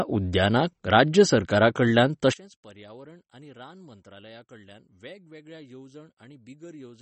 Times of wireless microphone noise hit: none

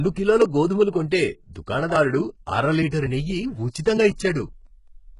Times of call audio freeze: none

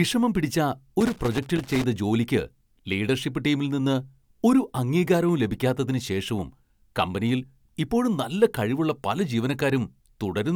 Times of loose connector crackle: 1.00-1.84

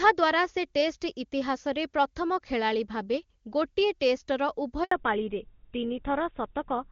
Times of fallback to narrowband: 4.91-6.91

